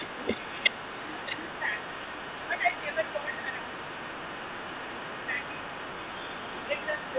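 From the start to 2.49 s, and again from 2.76 s to the end, there's an echo leak: a faint copy of the speech trailing about 370 ms behind, roughly 15 dB down, likely far-end loudspeaker pickup the echo canceller didn't fully remove. Speech suppressed in double talk overlaps it, with the talker dipping by about 10 dB at 0.21–0.38 s, 1.14–1.74 s and 2.48–3.76 s, then by about 5 dB at 4.38–4.43 s and 6.89–6.99 s, likely the canceller ducking its own talker along with the echo while they overlap.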